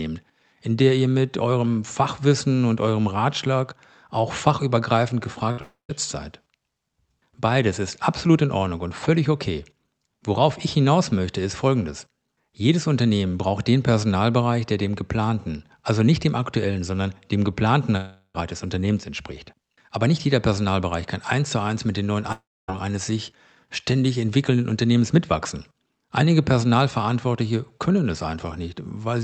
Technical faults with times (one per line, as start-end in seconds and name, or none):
5.51-5.59 burst of packet loss
5.61-5.91 long network dropout
17.97-18.36 long network dropout
22.32-22.70 long network dropout